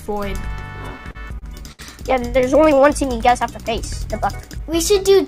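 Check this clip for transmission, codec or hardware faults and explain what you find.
There is one transmission fault: repeated stalls (stutter) between 0.98 and 2.80 s. Packets reached the receiver late or more slowly than playback consumed them, so its jitter buffer ran dry ten times. Each time, the receiver stretched the preceding sound to cover the wait, about 232 ms of fill in total with the longest pause near 70 ms. Nothing is lost, but roughly 13% of that stretch is filler, so the audio hesitates and drags in a stuttering rhythm.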